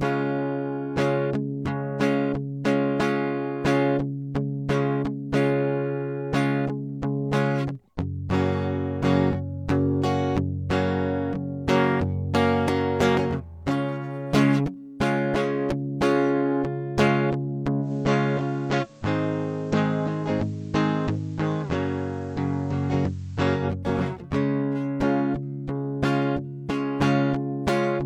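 At 17.80 s the music undergoes a digital radio blending to analogue: the receiver lost its digital stream and cross-faded over 121 ms to the station's FM broadcast, returning at 23.66 s. During that stretch the level drops by about 2 dB and a steady hiss sits roughly 35 dB below the music. On a spectrogram a faint noise floor appears between those times. The waveform shows a slight step down in amplitude.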